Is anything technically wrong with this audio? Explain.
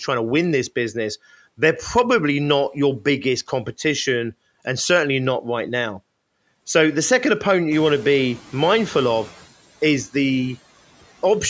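Yes, there are two faults in this speech. Noise suppressor artifacts run throughout: the suppressor lowers bands it judges to be steady noise, frame by frame, by about 16 dB, so the background dips between words and swells beneath them. The noise suppressor catching up occurs from 7.71 to 9.35 s, right after "the second opponent". When the room noise jumps by about 14 dB around 7.5 s, the suppressor's noise estimate lags, so the louder background leaks through with only about 8 dB of reduction before sinking over about 1.6 s.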